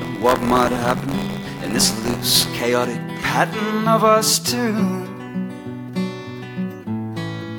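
Buffer tearing runs from the start of the music to 2.59 s. The writing side and the reading side of the playback ring buffer have drifted out of step, so in every period a small slice, around a twentieth, holds audio from roughly 20 ms earlier, spliced in with hard edges. Those repeating joins form a rattling, robotic buzz at 86.1 Hz, which fits a 512-sample buffer. The buzz rides on the music as long as it sounds.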